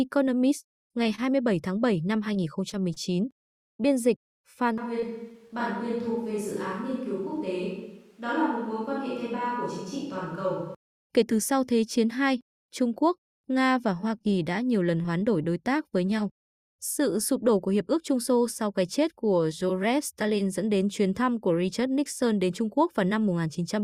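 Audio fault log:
1.03–1.07 s, short stall from a late packet: a packet arrived late, the jitter buffer ran dry, and the last sound was held for 17 ms before resuming where it left off. Nothing is lost, and the playout delay grows by 17 ms. The spectrogram shows a brief frozen, smeared column, and the waveform a short repeated stretch.
1.15–1.20 s, short concealed packet loss: 20 ms of audio never reached the decoder, and the receiver bridged it with 26 ms of continued sound before blending back. It is heard as a quick smear or wobble. The spectrogram shows a blurred patch where the harmonics continue too evenly, and the waveform a slightly repetitive section.
2.34–3.72 s, scattered short gaps: about seven separate packets went missing, 80 ms in all, each hole no longer than about 20 ms and each patched by continuing the preceding sound. The result is isolated ticks and hiccups. The spectrogram shows thin smeared slivers spread across this span.
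4.78–10.75 s, switch to a distant microphone: the sound suddenly turns hollow and roomy, thinner in the bass and about 5 dB quieter, with room noise only about 35 dB below the speech. The likely cause is the close microphone dropping out in favour of a farther one. The spectrogram shows a sharp step in level and tone at each boundary, with reverberant tails smearing the energy.
5.00–5.58 s, repeated packet loss (robotic sound): inside the distant-microphone stretch, three holes in quick succession, 60 ms missing in all and the longest 21 ms, were each filled by extending the last sound. About a tenth of this span is concealed, so it sounds choppy. The spectrogram shows repeated, comb-like smeared blocks.
14.18–15.81 s, scattered short gaps: about five lost packets, 60 ms missing in all and none longer than about 20 ms, were each concealed by continuing the prior sound. This leaves brief ticks and smears just before "với nhau", seen as short blurred slivers in the spectrogram and small repeated patches in the waveform.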